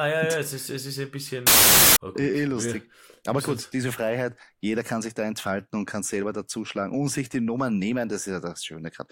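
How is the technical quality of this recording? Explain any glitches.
One glitch stands out. From 1.47 to 1.96 s, about half a second, the speech is buried under a burst of loud, harsh broadband noise. These are samples built from the wrong bytes. The decoder assembled each sample from misaligned or swapped bytes. The rapidly changing low-order bits therefore landed in the high-order position and dominated every value. The result is a harsh hiss at high level.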